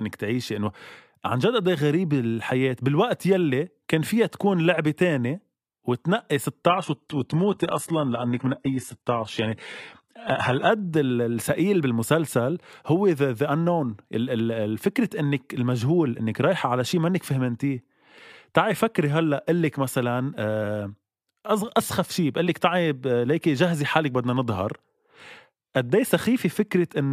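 A speech clip in which an adaptive stream switches to a lower bitrate from 6.69 to 10.69 s. The change is sudden and leaves no gap. The treble goes thin and synthetic, with a swirly, metallic edge, as the codec rebuilds the high band from the low band. That points to a drop from a mid-rate AAC stream to a very low-rate HE-AAC one after the connection slowed. On a spectrogram the upper band turns blocky and smeared for those four seconds, then snaps back. The waveform shows no break.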